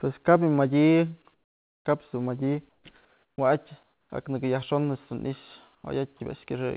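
At 1.34 to 1.85 s, then 2.69, 3.05, 3.83 and 5.75 s, the pauses switch to flat comfort noise in place of the background, about 3 to 10 dB quieter, likely discontinuous transmission.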